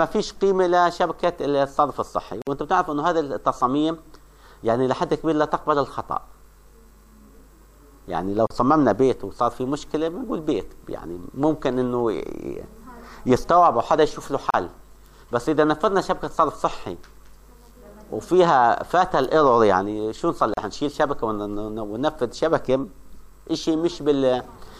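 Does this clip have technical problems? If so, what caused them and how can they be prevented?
Yes. A gap at a join of encoded pieces occurs at 2.42 to 2.47 s (about 52 ms), then at 8.47, 14.50 and 20.54 s (about 34 ms each), every 6 s. Separately encoded segments were concatenated with each encoder's start-up delay and final-frame padding left in, so the sound briefly drops to silence and resumes where it stopped. Trim encoder delay and padding using gapless metadata, or encode the whole stream in one pass.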